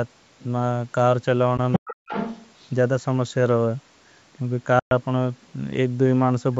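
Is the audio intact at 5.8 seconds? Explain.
Yes, the speech at 5.8 seconds is intact, with only the normal bass trimming of call microphone processing and nothing above 8 kHz.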